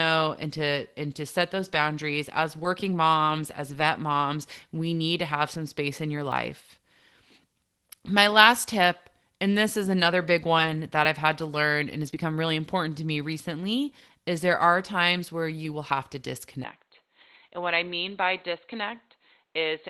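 A dropped buffer (overrun) at 6.32 s sounds like a small jump in the speech. The likely cause is that the recording program fell behind and the audio hardware overwrote a block of roughly 15 ms before it was collected. The audio on either side is spliced directly, with no silence.

Lost packets rebuilt from error correction come next, at 9.52 to 9.54 s. One 20 ms packet never arrived, and the decoder played the low-bitrate copy carried in the following packet. That stretch sounds grainier. A longer run at 10.58 to 10.76 s, between "this is another big" and "that i've had to", covers five packets, 100 ms in all. The rebuilt audio there is rougher and noisier.

A second dropped buffer (overrun) at 11.05 s, just before "i've had to learn", gives another skip. Roughly 10 ms is missing, likely for the same reason.

The densest trouble comes around 12 s. Error-correction rebuilds cover 12.03 to 12.09 s (two packets, 40 ms). 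A short concealed packet loss follows at 12.11 to 12.14 s, where 20 ms was missing entirely and about 13 ms of it was filled by extending the preceding sound before blending back. That is heard as a brief smear. One more rebuilt packet at 12.14 to 12.16 s leads into "really important to me". A further single rebuilt 20 ms packet at 14.52 to 14.54 s adds some roughness.

Finally, at 16.64 s the input switched to a poorer device, likely another microphone or a headset's call mode. The sound turns dull and boxy to the end of the clip. The level drops by about 5 dB, and a new noise floor sits about 50 dB below the speech. The change is abrupt, with no gap at the switch.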